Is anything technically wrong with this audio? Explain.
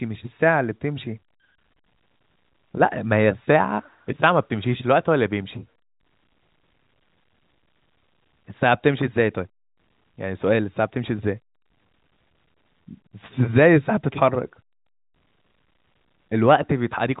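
No, nothing is technically wrong: this is speech carried over G.711 A-law telephone coding at 64 kbps, so the audio is band-limited to below 4 kHz with only the faint level-tracking quantisation noise that format brings.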